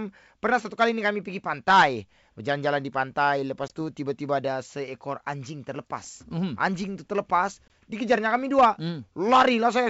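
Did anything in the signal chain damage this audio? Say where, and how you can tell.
Yes. Packet loss on an ADPCM call hits the network stage at 3.68 to 3.72 s and 7.68 to 7.70 s. Each is a hard-edged 20 ms silent hole, about one packet, after which the speech returns with brief distortion while the decoder's predictor and step size resynchronise with the G.722 sender.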